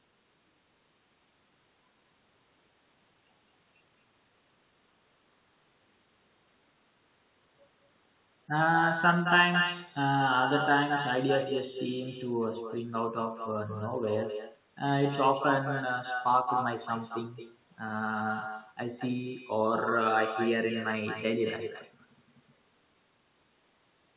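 From start to finish there's an echo with no canceller: the far end's speaker bleeds into its mic and nothing strips it out, so every phrase returns about a fifth of a second later, only about 7 dB down, as a thinner shadow over the speech, all of it narrowband with nothing above 4 kHz.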